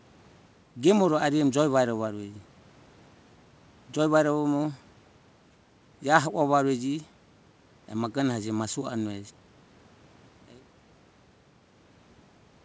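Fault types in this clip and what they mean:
No technical faults are present.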